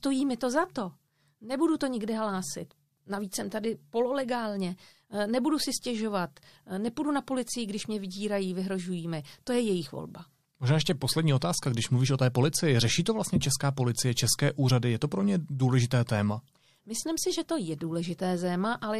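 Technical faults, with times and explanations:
11.40–11.42 s, pre-echo: right after "ještě poslední" and just before "když mluvíš o té", there's a quick burst of hiss, about 12 dB above the background, spread over roughly 20 ms ahead of a sharp onset, and the onset itself sounds softened. The codec spread its quantisation noise across the whole block, so the noise meant for the loud attack leaked into the quiet gap before it. That fits a long transform window of around 36 ms with no switch to short blocks.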